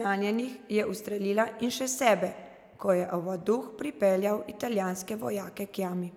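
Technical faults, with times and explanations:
No technical faults can be heard in this speech clip.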